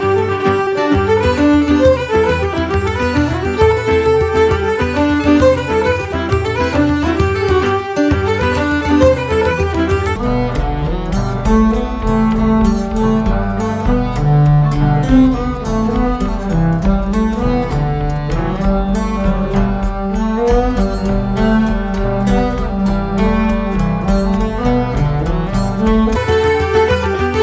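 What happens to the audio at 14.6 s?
At 14.6 s the audio is inside a wrong sample rate fault running from 10.16 to 26.16 s. It plays at half speed and exactly an octave lower, which fits 32 kHz material played at 16 kHz. Unlike a pitch shift or time-stretch, tempo and pitch fall together.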